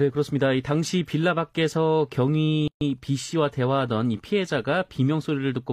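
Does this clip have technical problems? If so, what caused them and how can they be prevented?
Yes. A gap at a join of encoded pieces opens from 2.68 to 2.81 s, a silence of 135 ms that cuts into the continuous speech with smeared edges. The speech then resumes where it stopped. The audio was encoded in separate pieces, and each piece's leading encoder delay and trailing frame padding stayed in at the join. To prevent it, encode the material as one continuous stream, or trim each piece's encoder delay and padding before joining.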